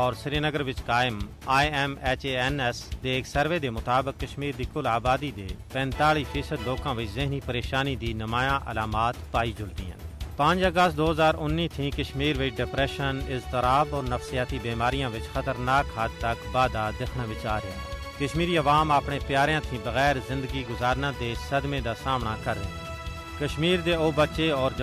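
No technical faults can be heard anywhere here.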